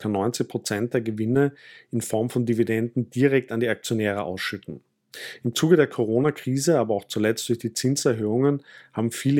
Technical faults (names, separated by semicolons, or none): none